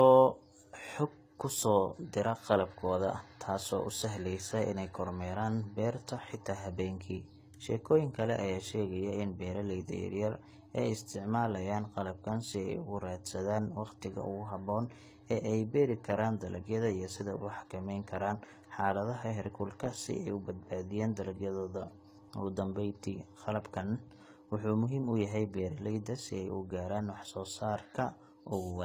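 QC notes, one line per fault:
throughout, transcoding between lossy codecs: two layers of compression damage are heard together. This is likely a low-bitrate HE-AAC pass re-encoded to AAC-LC near 64 kbit/s. The spectrogram shows nothing above 14.8 kHz and blocky, patchy upper bands.
throughout, sample clock jitter: a faint hiss and roughness rides on the speech. It is strongest on loud, bright sibilants and vanishes in pauses because the converter clock wanders by a microsecond or two and the resulting error grows with the slope of the waveform. The error sits roughly 40 dB below the signal, and on the spectrogram the noise floor rises and falls with the speech.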